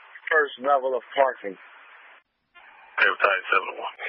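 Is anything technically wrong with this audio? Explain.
No, nothing technically wrong can be heard here.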